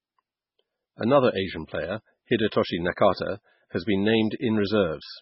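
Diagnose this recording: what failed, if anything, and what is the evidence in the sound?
Codec stage. The speech has nothing above 5.6 kHz throughout and sounds heavily watery. That points to a very low bitrate, fitting 16 kbps, likely MP3 compression.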